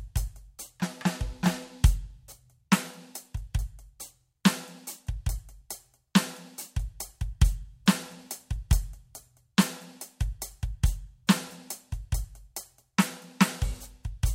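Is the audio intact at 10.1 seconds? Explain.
No. At 10.1 seconds the music is inside a run of clock drift buffer slips lasting from 1.20 to 12.97 s: a short click recurs every 1.47 s, about ten times in all. The likely cause is two devices on separate clocks, roughly 1000 ppm apart, so the buffer between them periodically drops or repeats a small block of samples, around 70 each time. Packet-loss clicks come at irregular times. These come at a metronomic interval.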